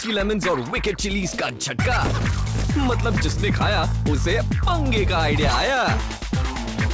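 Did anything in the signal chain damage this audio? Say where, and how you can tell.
No: the audio came over a call path whose content stops at 8 kHz, which fits a wideband codec such as G.722, and no stage in the chain shows any damage.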